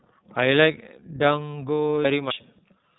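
Throughout, the speech sounds narrowband, slightly rough and synthetic, with nothing above about 3.9 kHz. That is the iLBC codec at work: each 30 ms frame's excitation is coded on its own, which fits its 13.3 kbps mode, and the damage is plainly audible.

At 2.05 s there is an abrupt jump forward, as well over half a second of speech vanishes without any gap of silence. At 2.30 s a second skip removes roughly a third of a second. Both are likely dropped buffers (overrun), where samples were overwritten before being read and the surviving edges were spliced together.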